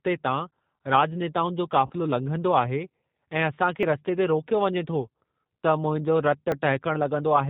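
Throughout, the speech sounds band-limited, slightly rough and synthetic, with nothing audible above 4 kHz. The codec damage is plainly audible. This is the signature of the G.729 codec, here its G.729A variant, at a rate consistent with 8 kbit/s. Rather than keeping the waveform, the codec rebuilds each 10 ms frame from a vocal tract filter, a pitch estimate and a handful of pulses. That model discards fine detail and gives the voice its artificial edge.

From 1.86 to 1.93 s the sound smears into a stretched, buzzy tone or coloured noise that fades rather than continuing naturally, and it takes a moment to recover its strength. This is VoIP packet loss concealed by the speech codec. The gap fits about four lost 10 ms frames. The decoder repeated its last pitch and filter settings with falling gain. Because each frame builds on the one before, the weakness lingers briefly after packets resume.

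At 3.83 s and again at 6.52 s there is an abrupt jump in the sound with no silence between. The first skip is on the order of 30 ms and the second closer to 10 ms. Each likely comes from a dropped buffer (overrun), where samples were overwritten before the program read them. The surviving audio on either side of each missing piece is spliced straight together.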